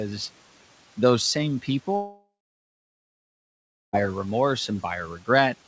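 Right after "those same", at 1.96 s, the speech cuts out until about 3.95 s, and the most likely cause is a long network dropout. The receiver stretches the last bit of sound into a fading buzz or hiss for a few tenths of a second, then there's roughly 1.6 s of near-silence. Elsewhere the room noise sits about 21 dB under the speech. When the talker returns, around two seconds of speech is simply gone.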